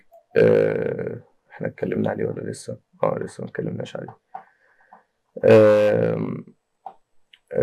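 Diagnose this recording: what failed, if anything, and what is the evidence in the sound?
Sample clock jitter throughout: an unstable converter clock of around a microsecond mistimes samples, adding roughness roughly 50 dB below the signal, strongest on loud, bright passages.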